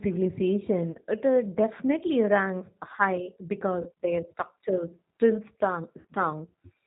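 Speech carried over a G.729 codec path, heard as the 8 kbit/s G.729A variant, with the codec damage plainly audible throughout. Nothing above 4 kHz comes through, so sibilants are dull and clipped off. Because the decoder rebuilds each 10 ms frame from a vocal tract filter, a pitch predictor and a handful of pulses, the voice has a rough, slightly synthetic grain. VoIP packet loss concealed by the speech codec interrupts the audio three times. At 0.92 to 0.97 s roughly 30 ms is missing, and at 3.82 to 3.90 s roughly 40 ms. In both gaps the decoder keeps extending the last pitch and filter at falling gain, so the voice smears into a short buzzy tone or coloured noise. At 6.00 to 6.07 s about 70 ms is lost in scattered bursts over 80 ms, the longest run about 50 ms. After each gap the speech stays weak or distorted for a while, because the decoder's predictors have to rebuild their state from the damaged frames.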